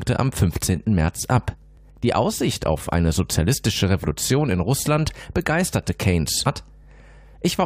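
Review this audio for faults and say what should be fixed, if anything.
Mains hum runs throughout: a steady 50 Hz tone sitting about 25 dB below the speech, picked up from the power line through a ground loop or a nearby transformer. To prevent it, break the ground loop or move the cabling away from transformers.

Overlapping chunks cause stutters at 0.76, 1.77, 2.79, 3.80, 4.81, 5.83 and 6.84 s. Each 1-second block begins 13 ms early, so a sliver repeats at every join. To prevent it, align chunk boundaries so each block starts exactly where the previous one ended.

Stream segment skipped at 6.45 s: the speech jumps abruptly with a small blip, likely because a stream segment failed to load and playback moved to the next. To prevent it, have the player retry or buffer failed segments before continuing.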